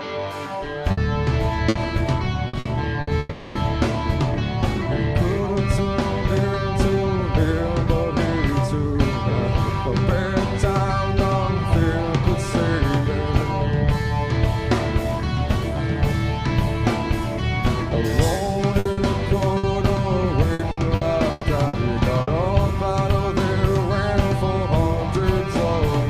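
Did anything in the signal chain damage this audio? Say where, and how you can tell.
Yes. At the mix-down stage, one channel ran about one sample late before the mono sum. From 0.0 to 14.49 s, channel delay (comb filtering) puts the first notch near 20 kHz, which only dulls the top.

In the network path, repeated packet loss (robotic sound) hit 0.91–3.10 s (five gaps, longest 60 ms) and 18.79–22.30 s (nine gaps, longest 120 ms). Each gap was patched by continuing the last sound, leaving choppy audio with pieces missing.

From 3.19 to 3.58 s, the last sound is stretched as a fading buzz or hiss for 360 ms, then the audio resumes without that part. This is likely a long network dropout.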